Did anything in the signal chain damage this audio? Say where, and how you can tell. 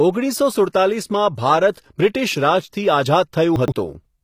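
Yes. At the codec stage, the speech was likely passed through HE-AAC compression at a low bitrate, around 24 kbps by the sound of it. Throughout, the treble above the coded band is rebuilt by band replication and stops dead near 14.9 kHz, so sibilants sound gritty and metallic.

At the buffer or network stage, chunks play out of order between 3.56 and 3.72 s. A block arrived late and plays three blocks behind its proper place, which fits 40 ms chunks. The speech briefly jumbles, with three hard joins.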